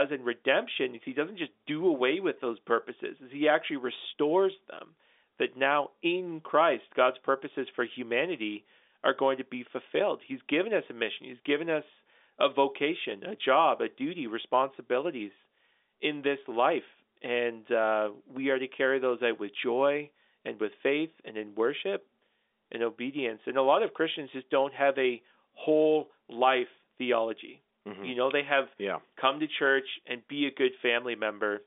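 Speech with no technical faults to report.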